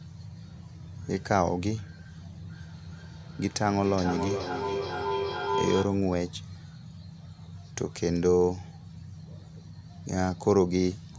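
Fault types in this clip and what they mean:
Feedback howl: a mic-to-speaker loop gaining level each pass; from 2.52 to 6.06 s a tone near 400 Hz builds, its repeats about every 0.4 s, a horizontal spectrogram line.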